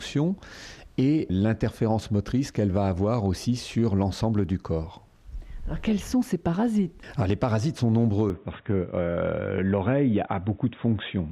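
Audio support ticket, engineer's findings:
From 8.3 s to end: sound abruptly dull and boxy, nothing above 3.8 kHz. No gap at the transition, level roughly unchanged, faint new noise floor well below signal. Likely input switched to a poorer device, narrower-band path replacing original capture.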